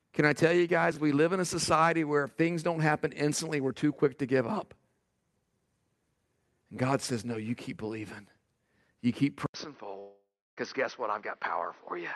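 A speech clip with three faults, carried over an Opus call path. At 0.92 s there is a brief jumbled moment, lasting about 47 ms. That is chunks out of order: one chunk of about 11.6 ms plays three chunks late, leaving hard joins. From 9.46 s the sound turns duller after an 80 ms silence, with nothing above 6.1 kHz. The level falls by about 5 dB, and a new noise floor sits roughly 30 dB down. The likely cause is the input switched to a poorer device. From 9.99 to 10.59 s about 0.58 s of audio is missing. A fading buzz covers the gap and then gives way to silence for about 0.32 s. This is likely a long network dropout.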